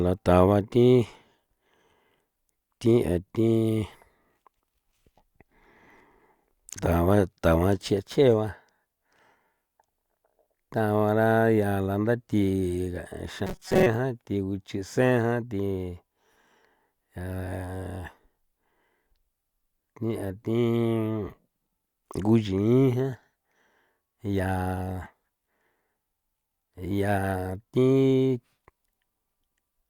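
Robotic sound from repeated short buffers affects 13.47 to 13.86 s, where the speech turns into a rigid metallic buzz near 188 Hz. Audio likely arrived too seldom, so a roughly 5.3 ms fragment repeated for most of that stretch, skipping real audio.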